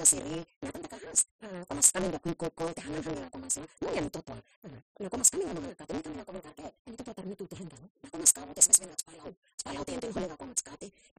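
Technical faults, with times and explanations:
Throughout, block size mismatch (truncated): each block's tail is discarded because the next stage reads less, fitting a 256-sample read. The speech runs 1.88 times fast at about normal pitch under a 172 Hz buzz. A spectrogram shows vertical stripes every 5.8 ms, and the waveform steps at each seam.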